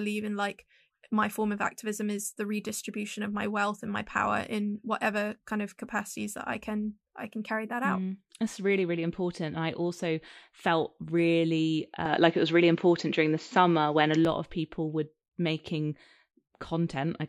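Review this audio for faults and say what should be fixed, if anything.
From 12.05 to 14.25 s, between "I also felt really" and "of people were making", the speech turns dull with nothing above 7.6 kHz, shifts level by around 5 dB and gains a faint new noise floor, all without a gap. The likely cause is an input switched to a poorer device. A plain filter change would not alter the level or the noise. Lock the recording input so the system cannot swap microphones mid-take.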